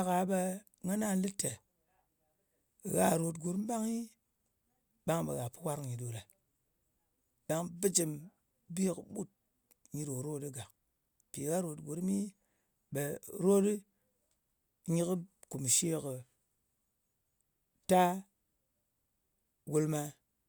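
Listening through the speech, nothing stood out as a technical problem at any point.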